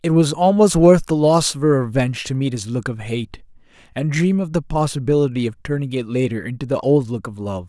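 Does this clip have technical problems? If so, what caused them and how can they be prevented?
No, there are no technical problems to report in this speech recording. Nothing in it points to a fault that needs a cause traced or a fix applied.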